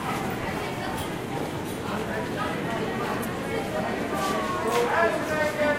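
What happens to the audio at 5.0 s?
Nothing goes wrong at 5.0 s: the sound carries on intact through that moment, with no dropout, click or distortion.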